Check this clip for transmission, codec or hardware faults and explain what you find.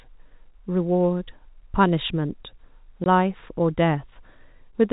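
One transmission fault is audible in this speech clip. From 3.04 to 3.06 s, the sound drops out abruptly for 20 ms. This is packet loss filled with silence: the receiver inserted silence for the missing audio, and a gap of that length fits a single lost packet. The G.711 telephone coding caps the band at 4 kHz.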